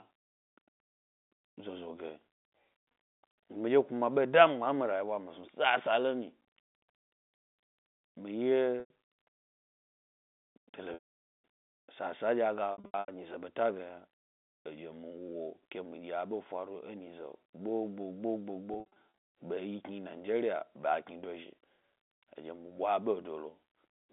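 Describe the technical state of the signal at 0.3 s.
At 0.3 s the audio is intact, with the speech carried cleanly over an ordinary G.711 telephone line limited to roughly 200 Hz to 3.6 kHz.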